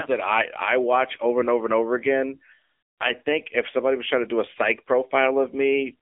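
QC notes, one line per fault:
Throughout: AMR narrowband mobile codec. The audio has passed through an AMR-NB phone-style channel and sounds boxed-in, buzzy and synthetic, with plainly audible codec damage. This fits one of the lower AMR modes, around 7.95 kbps, where too few pulses are left to rebuild the excitation cleanly. On a spectrogram the energy stops at a flat ceiling near 3.6 kHz, with the line band thinning below about 300 Hz. The waveform looks smoothed and lacks fine detail.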